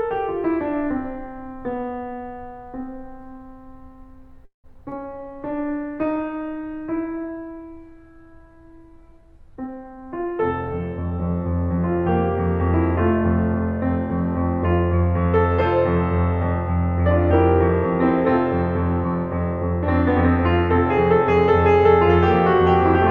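At 4.45 to 4.66 s the music stalls: the last sound carries on briefly, then about 120 ms of silence, then resumes unbroken. That is a call audio freeze, likely from delayed packets emptying the jitter buffer. Unlike loss, nothing is skipped.

Short concealed packet loss follows at 4.74 to 4.77 s and 4.89 to 4.97 s. About 20 ms was lost each time and patched with extrapolated sound, heard as brief smears rather than a pause.

From 5.13 to 12.41 s a call bitrate drop takes the encoder from 96 to 25 kbps, bottoming out for about 6 s. The bandwidth narrows from 20 kHz to 12 kHz, so the music turns dull and grainy rather than breaking up.

A jitter buffer speed-up at 9.56 to 10.39 s plays 17% fast, trimming about 150 ms. A second at 10.79 to 11.18 s runs 9% fast, trimming about 50 ms. The tempo rushes while the pitch stays unchanged.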